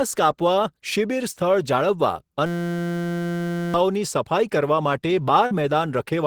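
From 2.46 s to 3.74 s the speech gives way to a steady, hard-edged buzz pitched at about 172 Hz. This is a system hang loop: while the computer or its audio driver stalled, the sound hardware kept replaying the same 5.8 ms slice of its output buffer, a length that fits a 256-sample buffer, over and over. Because the repeating piece is so short, the repetitions fuse into a tone. Roughly one and a half seconds of speech never made it out.

Between 5.46 s and 5.52 s there is a brief smear, a moment where the sound seems to hold and wobble before the speech carries on. This is short concealed packet loss. About 50 ms of audio failed to reach the decoder in time, and the receiver covered 43 ms of that gap by extending the preceding sound, then blended back into the real signal. The patch is quick, but what was actually said in that instant is lost.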